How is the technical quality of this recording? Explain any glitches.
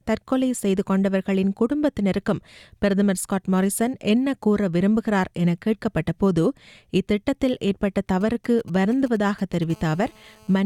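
The recording is marred near the end by radio interference from a nearby 2G mobile phone, heard first as intermittent signalling and then as a continuous call buzz.

From 8.21 to 9.64 s come GSM signalling bursts. The phone transmits only short groups of radio pulses while it is handling signalling traffic. The audio circuitry rectifies these pulses into a galloping dit-dit-dit of brief 217 Hz buzzes, sitting around 25 dB below the wanted sound. On a spectrogram they show as separated vertical clusters of stacked harmonic lines spaced 217 Hz apart. In the waveform they appear as short comb-like bursts.

From 9.70 to 10.61 s the interference becomes GSM phone buzz. The phone is now in a call, so it transmits its bursts continuously at 217 Hz. Rectification turns that pulse train into a hard, raspy buzz at about 30 dB below the signal, unrelated to the recorded material. A spectrogram shows unbroken horizontal harmonic lines at 217 Hz and its multiples reaching high up. 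The waveform carries a steady, regular spiky ripple.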